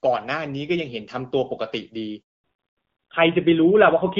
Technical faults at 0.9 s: none

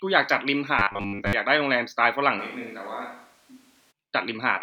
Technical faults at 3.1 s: switch to a distant microphone

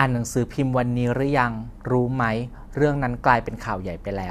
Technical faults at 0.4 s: none

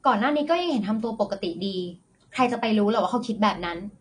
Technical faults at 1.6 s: AAC compression

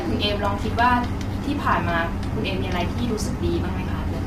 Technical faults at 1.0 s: low-delay AAC compression

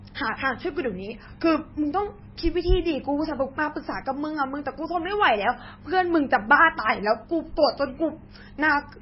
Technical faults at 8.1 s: MP3 compression

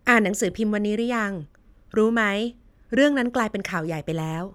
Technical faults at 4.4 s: none

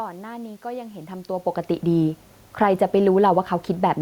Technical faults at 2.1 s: none

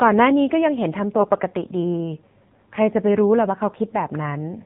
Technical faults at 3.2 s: AMR narrowband mobile codec

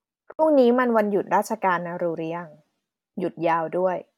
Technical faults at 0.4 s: Bluetooth stall

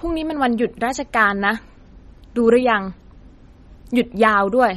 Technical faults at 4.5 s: MP3 compression

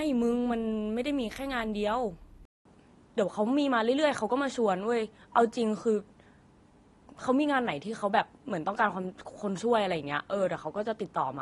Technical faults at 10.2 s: AAC compression; input switched to a poorer device

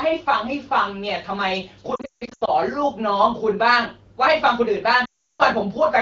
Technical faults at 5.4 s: lost AMR speech frames

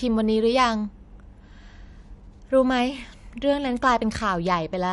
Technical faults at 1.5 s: MP3 compression

